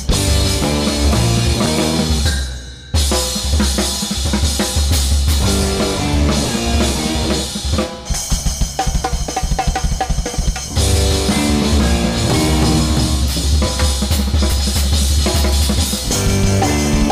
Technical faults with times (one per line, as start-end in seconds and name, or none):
6.16 dropped buffer (overrun)
8.40 dropped buffer (overrun)
14.52 dropped buffer (overrun)